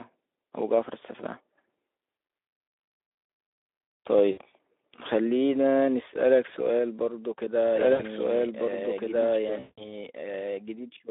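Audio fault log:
4.31, 7.93 and 9.59 s, VoIP packet loss concealed by the speech codec: the Speex decoder bridges 60, 60 and 180 ms gaps by extrapolating, leaving fading buzzy smears.
7.75 s to end, doubled audio track: a full-band copy about as loud trails by roughly a second and a half, starting abruptly, likely from a second capture path.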